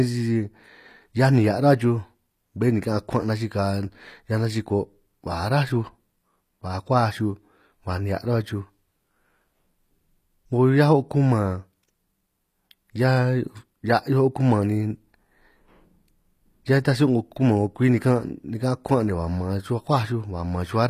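HE-AAC compression runs throughout: treble stops at 14.9 kHz, likely rebuilt from copied lower bands, so sibilance sounds gritty, pointing to roughly 24 kbps.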